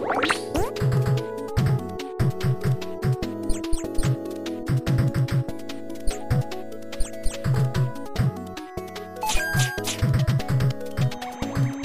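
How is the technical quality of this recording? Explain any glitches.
No audible glitches or faults.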